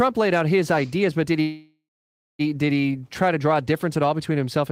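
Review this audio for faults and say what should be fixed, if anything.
Packets were likely delayed in transit, so the jitter buffer ran dry and produced a call audio freeze from 1.41 to 2.41 s. The last sound is stretched out and fades, then about 540 ms is silent. The speech then resumes where it stopped, about 0.98 s late, with nothing lost. A larger or adaptive jitter buffer, with steadier network delivery, would prevent this.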